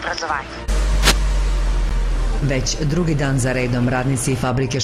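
From 1.02 to 1.17 s a burst of cable scratch noise rides over the sound, dense and uneven, at roughly the same level as the signal. It is likely a worn cable, connector or control being moved, with its contact resistance fluctuating rapidly.

At 1.89 s a gap between stream segments cuts a hard-edged silent hole of about 14.5 ms into the audio. Two segments' time stamps failed to line up, and the player padded the difference with silence rather than dropping material.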